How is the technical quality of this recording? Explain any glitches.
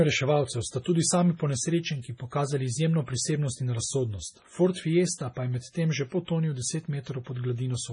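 The quality is poor throughout, with heavy low-bitrate compression damage across the whole speech clip. It is likely MP3 compression. The treble stops dead at 10.5 kHz, and weak frequency lines drop in and out between frames, giving a watery, swirly texture, metallic s sounds and smeared onsets. That fits a bitrate around 24 kbps. A spectrogram shows a flat ceiling at 10.5 kHz and flickering gaps below it.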